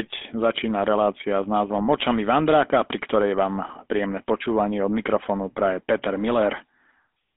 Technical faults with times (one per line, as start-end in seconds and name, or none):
0.00-7.37 GSM full-rate codec